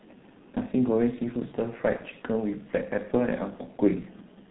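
G.723.1 codec coding runs through the whole clip: the speech is band-limited below 4 kHz, muffled and hoarse, with smeared consonants, heavy damage consistent with its 6.3 kbit/s mode. VoIP packet loss concealed by the speech codec occurs at 1.97 to 2.02 s, where the decoder extrapolates from its last frame and the sound is briefly stretched and fades, which fits one lost 30 ms frame.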